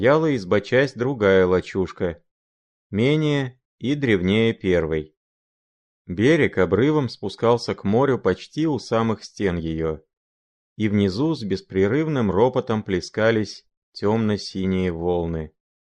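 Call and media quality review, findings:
No faults found: the speech signal is continuous and intact, with no dropouts, discontinuities or level problems audible anywhere.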